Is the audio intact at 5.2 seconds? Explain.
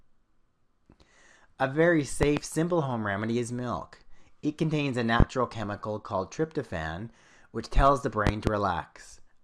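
No. A loud pop sits on the audio from 5.20 to 5.24 s, a single burst about 25 dB above the surrounding level. It is most likely a sudden voltage step from a plug, a switch or static, which the downstream circuitry turns into a short rounded pulse. It sounds like one sharp thump. Unlike a dropout, the sound carries on beneath it rather than cutting out, and it is broader and heavier than a tiny digital click.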